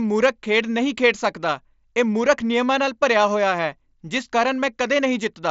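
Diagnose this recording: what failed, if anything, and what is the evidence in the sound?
Nothing failed; no fault is audible in this speech.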